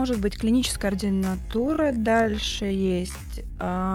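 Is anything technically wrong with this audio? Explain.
Yes. From 1.0 s to the end, there is a time-stretched section: software likely stretched that stretch of audio to fill a longer slot, slowing it to 0.53 times its original speed while holding the pitch steady by repeating short slices of the waveform. Because those slices are duplicated and overlapped rather than played once, the sound after 1.0 s drags, and its pace drops abruptly even though the pitch stays the same.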